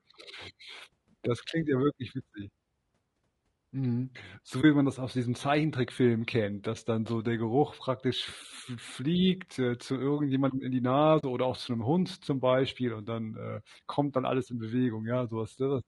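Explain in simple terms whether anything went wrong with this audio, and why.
Something did go wrong, in two separate ways.

Throughout the whole recording the speech sounds rough and grainy, with a hissy fuzz between the tones of the voice and a thin, artificial-sounding top end. That points to heavy low-delay AAC compression, the likely cause being the kind of codec used in video calls squeezed into too little data. It differs from ordinary background noise because the grain follows the voice itself and disappears when nobody is talking.

There are also two brief holes from AAC frame loss with muting. The first, from 4.61 to 4.64 s, comes just before "man das aus diesem" and is short enough to fit one missing chunk of audio. The second, from 11.19 to 11.24 s, falls between "zu irgendjemandem in die" and "oder auch zu 'nem" and is about twice as long, which fits two missing chunks. Unlike a hard dropout, the sound fades out and back in smoothly.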